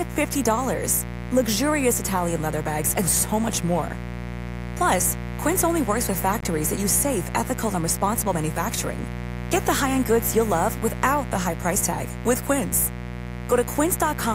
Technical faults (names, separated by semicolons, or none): mains buzz; Bluetooth dropout